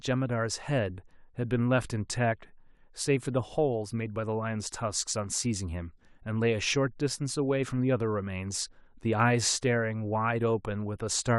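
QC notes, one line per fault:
No faults stood out on listening to this speech clip.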